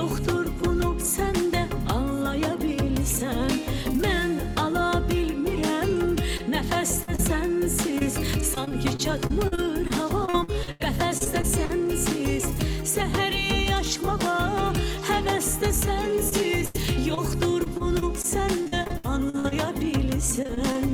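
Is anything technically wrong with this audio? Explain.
Yes. Brief smears and wobbles at 6.37–6.41 s, 7.03–7.09 s and 7.15–7.20 s are short concealed packet loss: 20 to 40 ms of audio never arrived and was patched by extending the preceding sound.

Choppy, robotic stretches at 7.98–11.71 s, 16.29–19.53 s and 20.43–20.76 s are repeated packet loss. There are 18, 16 and 4 closely spaced holes, up to 90 ms each, and every one is filled by continuing the last sound.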